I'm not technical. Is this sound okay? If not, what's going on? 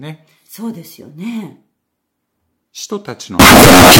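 No. From 3.39 s to the end, the speech turns into very loud, harsh distortion, with quiet moments as loud as everything else. This is likely signed and unsigned mixed up: the 16-bit samples are misread, so every pass through silence becomes a full-range jump.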